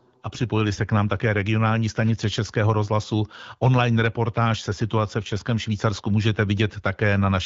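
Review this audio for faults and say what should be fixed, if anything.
Nothing here needs fixing. The speech has the sound of AMR wideband (HD Voice) coding, with light coding texture and a synthesized top band above 6.4 kHz, which fits a 12.65 kbit/s rate.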